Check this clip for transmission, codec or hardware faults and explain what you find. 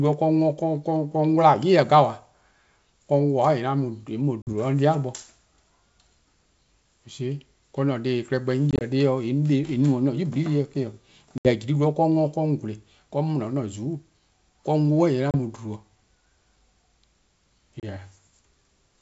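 Yes, there are transmission faults: five short dropouts from packet loss on an ADPCM call, in speech carried over G.722 wideband coding at 64 kbit/s, whose upper band reaches to about 7 kHz.

The gaps fall at 4.42–4.53 s (about 50 ms missing), 8.71–8.83 s (60 ms scattered over 100 ms in runs no longer than 20 ms), 11.38–11.52 s (70 ms), 15.31–15.35 s and 17.80–17.85 s (30 ms each). Each is a handful of lost packets filled with silence. Because ADPCM codes each sample as a difference from a prediction, with an adaptive step size, the decoder's predictor and step size drift away from the sender's during the hole. When speech resumes, it comes back slightly distorted before resynchronising within some tens of milliseconds. On a waveform each gap is a flat, hard-edged stretch. At 8.71 s it is a comb of short flat segments. On a spectrogram these show as clean vertical blank bands across all frequencies.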